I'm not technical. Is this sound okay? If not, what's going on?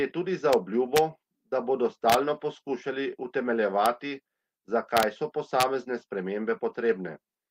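No. The speech has two kinds of problems.

Integer overflow: sharp, violent cracks at about 0.53 s just after "tudi za", 0.96 to 0.98 s just before "da bodo", 2.10 to 2.14 s just after "da bodo", then 3.86 s, 4.97 to 5.03 s and 5.60 to 5.63 s. They are much harsher than ordinary distortion. When the loudest moments went past the biggest number the system could store, the value wrapped around to the opposite extreme instead of being held at the limit.

Lost packet rebuilt from error correction: there are two brief rough, grainy patches at about 3.61 to 3.67 s and 6.69 to 6.75 s, each about 40 ms long, with no silence. This fits a couple of pieces of audio going missing in transmission. The piece that followed each one carried a lower-quality spare copy, so the player used that copy to fill the gap.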